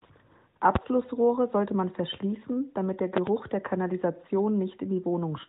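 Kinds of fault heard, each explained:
Loud pop: a sharp transient roughly 20 dB above the speech, likely a voltage spike from a switch, connector or static discharge. A single pop lands at 0.75 s, then a quick double pop from 3.17 to 3.30 s, with speech continuing underneath.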